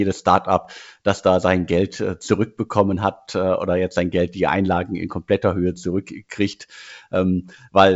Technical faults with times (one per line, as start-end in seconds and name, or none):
none